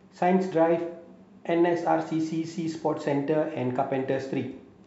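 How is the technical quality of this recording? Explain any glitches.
Listening closely to the recording, nothing stood out as a technical glitch or fault at any point.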